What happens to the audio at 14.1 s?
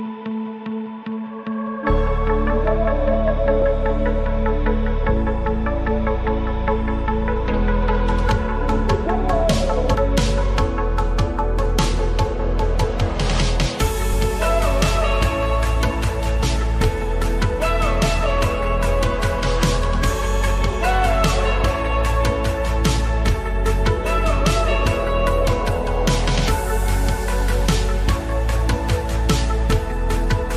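Damaged data in the compressed stream hits at 14.12 s, lasting only about 14 ms. At that point the encoded bytes are corrupt, so the decoder cannot read the frame correctly. It loses its place in the stream and has to search forward for the next valid frame header before decoding resumes. The result is a very short, harsh blip, a tiny chirp or squawk that briefly breaks into the sound and then is gone.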